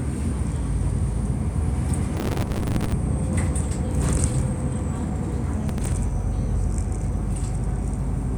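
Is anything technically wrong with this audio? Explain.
Yes. Processor overload crackle occurs from 2.17 to 2.92 s and again from 5.69 to 5.92 s. A gritty, tearing crackle rides on the sound. The processor missed its deadlines on buffers of around 5 ms, dozens in the first burst and a handful in the second. Each miss repeated a hard-edged scrap of old audio.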